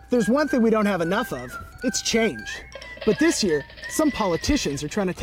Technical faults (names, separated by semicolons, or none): sample clock jitter